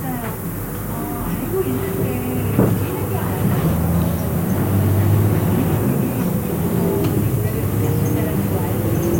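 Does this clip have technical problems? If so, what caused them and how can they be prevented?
Yes. Throughout, a steady thin hiss rising sharply toward the top of the band points to low bit depth with noise shaping. About 6 bits, with rounding error pushed upward, leaves noise only about ten dB below the sound. Unshaped truncation would sound grainier and flatter. Prevent it by keeping 16 or more bits through export.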